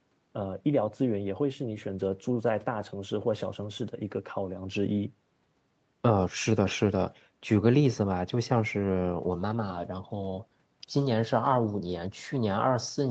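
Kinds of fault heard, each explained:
Nothing stood out on listening; the speech carries the ordinary sound of a call connection, with nothing above about 8 kHz.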